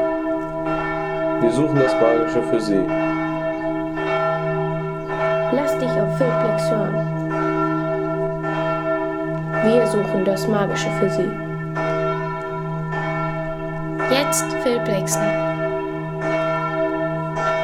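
No technical faults can be heard anywhere in the signal.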